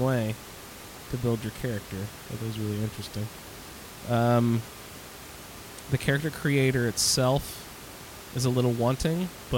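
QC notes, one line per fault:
No faults found; room noise sits about 17 dB below the speech as part of the recording.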